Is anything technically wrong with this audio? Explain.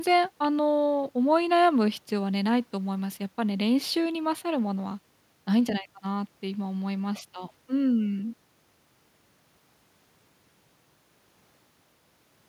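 No, no technical faults here.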